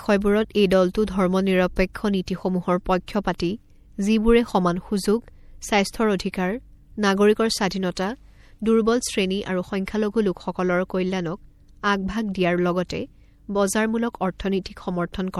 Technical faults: MP3 compression

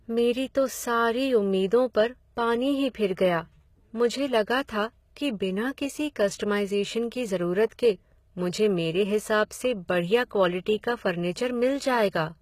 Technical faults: HE-AAC compression; pre-echo

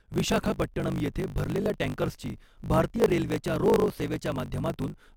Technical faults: block size mismatch (truncated)

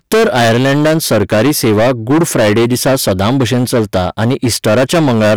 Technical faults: hard clipping

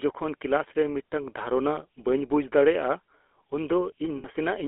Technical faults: GSM full-rate codec; lost GSM frames

